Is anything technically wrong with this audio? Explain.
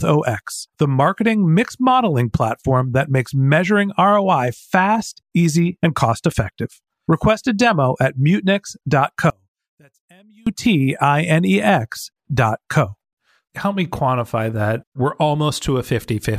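Yes. From 9.30 to 10.47 s the speech nearly vanishes, dropping about 35 dB, likely one channel inverted, so the matching left and right signals cancel when summed.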